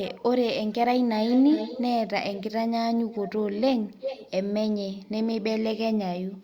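An echo leak, likely from a far end on loudspeaker whose echo canceller let part of the returning speech through, sends a delayed copy of the voice back about 0.39 s behind the original. It surfaces in scraps at 0.04–0.22 s, 1.28–1.92 s, 2.34–2.43 s, 3.12–3.3 s, 3.87–4.31 s and 5.03–5.08 s. Most of these are faint and the last is barely there, but the copy is clearly audible from 1.28 s and nearly as loud as the voice itself from 3.87 s.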